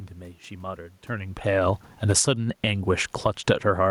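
From 1.94 to 2.37 s the automatic gain falling pulls the level down by about 14 dB: having judged the input too loud or its background noise too strong, the gain control eases its gain down, so the room noise sinks along with the speech. A second, smaller drop of about 4 dB follows from 3.1 to 3.51 s. On a waveform the envelope tapers over each span; a spectrogram shows every band, background included, fading together.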